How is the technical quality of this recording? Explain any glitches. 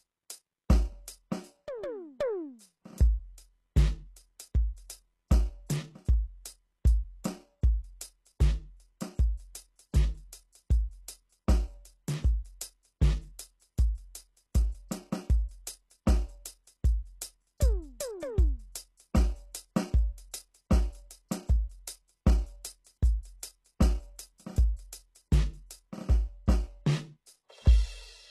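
The technical quality is poor, with plainly audible codec damage throughout the music. HE-AAC compression is the likely cause. The upper treble sounds synthetic and does not line up with the lower spectrum. Nothing is present above 12.3 kHz. This fits a very low bitrate, near 16 kbps.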